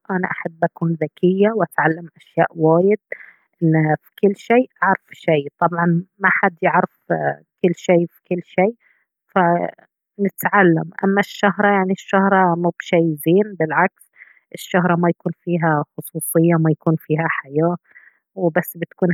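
No technical faults can be heard anywhere in the recording, and the speech signal holds steady throughout.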